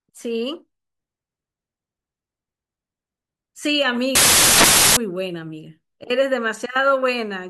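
From 4.15 to 4.97 s the decoder is building samples from the wrong bytes. It assembles each value with the byte order swapped or the boundary shifted by one byte, so the rapidly changing low-order bits land in the most significant position. For those 0.81 s the speech is replaced by a burst of loud, harsh broadband noise, then the clip returns abruptly at 4.97 s.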